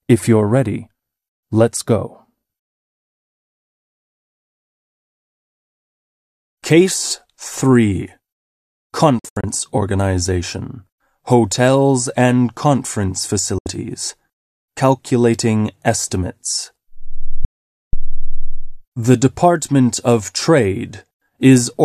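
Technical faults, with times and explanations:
9.19 to 9.44 s, 13.58 to 13.66 s and 17.45 to 17.93 s, digital broadcast dropout: the receiver stopped getting valid frames and muted, fading out in about 3 ms. Each gap is true silence, not the warbled or repeated sound of loss concealment. The first is scattered short holes over 240 ms, none longer than 72 ms. The others are single gaps of 72 ms and 480 ms. The gap lengths step in 24 ms units, which fits a 24 ms frame. The sound resumes further on, and what was sent meanwhile is gone.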